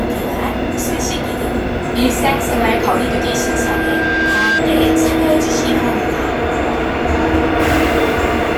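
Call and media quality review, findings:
Loudspeaker feedback squeal, 2.89 to 4.63 s. Probable component is an open mic-to-speaker acoustic loop, with loop gain above unity at 1.6 kHz. A single 1.6 kHz tone swells over about a second and a half to roughly the same level as the surrounding sound, then stops.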